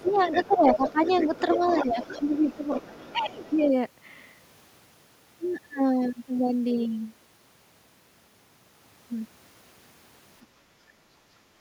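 From 0.06 to 3.59 s the other side's voice leaks through faintly, about 15 dB below the talker. This is likely residual echo that the canceller left in the microphone signal. Unlike suppression, it adds a second voice rather than removing any sound. In the same stretch the speech is suppressed in double talk at 0–0.26, 0.47–1.0, 1.57–1.93, 2.09–2.46 and 3.12–3.61 s, dipping by roughly 10 dB (the 1.57 s dip is shallower). This is likely the canceller ducking the talker while both sides overlap. A final, much deeper cut of roughly 30 dB starts at 11.53 s and runs to the end.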